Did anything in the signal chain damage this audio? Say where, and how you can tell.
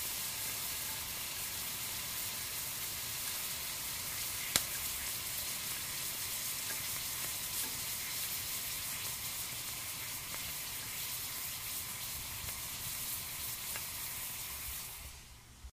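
No, nothing in the signal chain has left an audible mark on this recording of sounds, which keeps intact level and bandwidth throughout.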